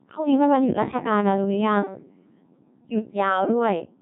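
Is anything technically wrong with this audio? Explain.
Yes, the speech has gone through a Codec 2 vocoder for its whole length. The codec transmits only pitch, voicing, energy and a spectral envelope, then rebuilds the voice from sine waves, so the original waveform is lost. The damage is heavy and the speech sounds robotic and buzzy, which fits a rate near 1.6 kbit/s. A spectrogram shows nothing above 3.8 kHz, and the waveform looks smooth and regularly periodic instead of like natural speech.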